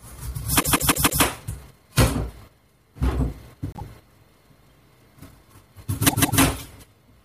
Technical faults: repeated frames

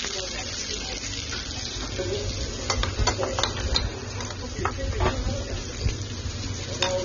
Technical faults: AAC compression

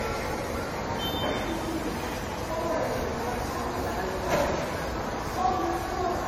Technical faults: generation loss

